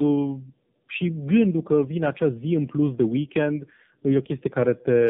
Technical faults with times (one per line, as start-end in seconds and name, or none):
0.00-5.09 tandem speech coding